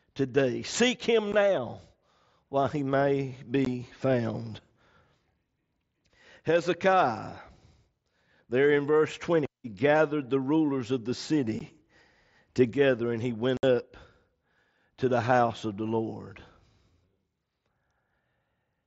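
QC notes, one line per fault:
1.32, 3.65 and 11.59 s: unconcealed Bluetooth headset packet loss. About 15 ms of voice packets between headset and phone never arrived and were replaced by silence or an idle pattern, leaving brief holes with abrupt edges. The last one comes just after "the rulers of the".
13.57–13.63 s: unconcealed Bluetooth headset packet loss. A longer run of about 60 ms of packets dropped right after "together and he went", cutting a gap into the speech with hard edges. Beneath it, the wideband mSBC headset codec carries the speech up to 8 kHz.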